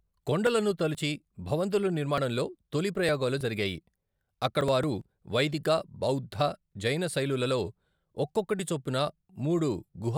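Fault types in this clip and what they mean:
Periodic USB or driver dropouts: something on the host stalls the USB bus or audio driver at a fixed interval, and each stall drops a few milliseconds of the speech outright, with the gap closed up rather than filled with silence. Here the losses recur every 2.0 s from about 4.61 s to 8.59 s, roughly three in all, and each one sounds as a short, regular tick or skip within the speech.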